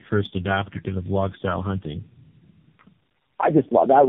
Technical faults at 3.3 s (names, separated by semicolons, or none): tandem speech coding